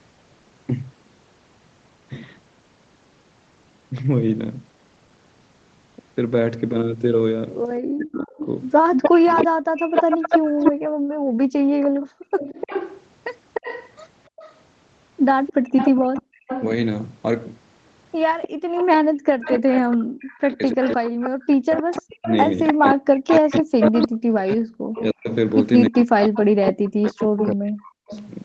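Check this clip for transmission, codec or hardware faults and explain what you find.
The speech has three echo-canceller problems, all sitting on a call path that tops out at 8 kHz.

Speech suppressed in double talk, 7.84–12.44 s and 19.42–28.13 s: the speech dips by as much as 40 dB or so, likely because the canceller ducked everything while both sides talked at once.

Echo leak, 8.38–10.72 s, 12.39–16.64 s and 18.42–28.29 s: a copy of the speech trails by 301 ms. It's roughly as loud as the speech at first, then quieter. It's likely leftover loudspeaker pickup the canceller failed to remove.

Background gated by the echo canceller, 10.86–11.37 s, 15.53–16.42 s and 18.48–19.14 s: the room sound drops about 40 dB for a moment as the canceller clamps the microphone during loudspeaker playback.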